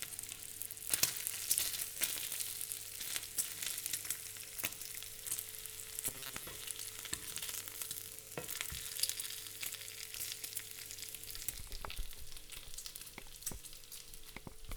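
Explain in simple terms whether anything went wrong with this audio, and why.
Between 6.08 and 6.47 s the sound turns into a rigid, metallic buzz at about 134 Hz: robotic sound from repeated short buffers. Roughly half the audio there was likely replaced by repeats of a 7.5 ms snippet while fresh audio arrived too slowly.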